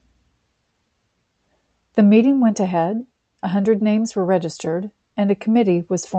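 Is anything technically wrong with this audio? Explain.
No, nothing stood out on listening to this speech clip.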